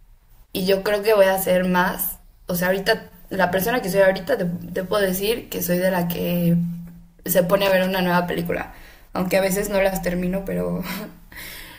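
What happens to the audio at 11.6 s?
Nothing goes wrong at 11.6 s; the audio is intact at that moment.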